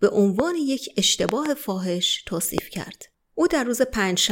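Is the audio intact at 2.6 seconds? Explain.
No. A single sharp loud pop, about 20 dB above the speech, cuts in from 2.58 to 2.60 s, likely a brief voltage spike added to the signal.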